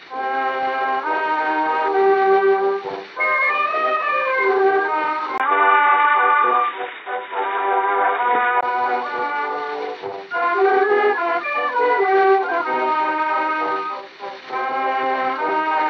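At 5.38 s the sound abruptly turns dull and boxy, with nothing above 3.8 kHz, after a brief gap of about 20 ms. This is likely an input switched to a poorer device. Unlike a simple low-pass filter or codec bandwidth drop, the level also shifts by about 5 dB and a new, faint background noise appears, well below the signal. At 8.63 s the full, clearer sound returns just as suddenly.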